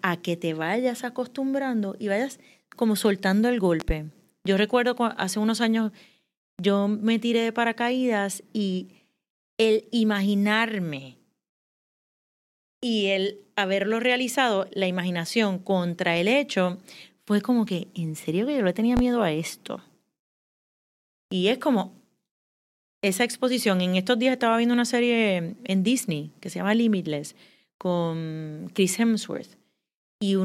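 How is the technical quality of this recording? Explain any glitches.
The recording has two loud pops. At 3.80 to 3.93 s a double pop sits over the speech, and at 18.97 to 19.01 s a single, harder one, peaking roughly 15 dB above the speech against about 10 dB for the first. A voltage step, likely from a plug, switch or static discharge, was added to the signal and shaped by later circuitry into a thump. Unlike a dropout, the speech continues uninterrupted beneath each pop.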